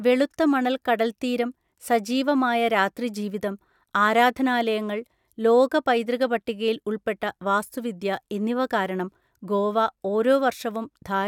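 No technical faults can be heard anywhere in the speech.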